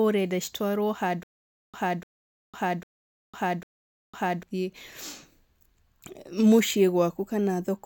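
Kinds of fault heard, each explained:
Stutter with silent gaps, 1.23 to 4.43 s after "ũrenda citwarwo": a 295 ms speech fragment repeats four times, each followed by about 504 ms of digital silence, likely from a stalled stream replaying its last fragment.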